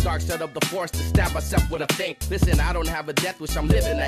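Nothing is technically wrong with this clip: there is no fault to report at any time.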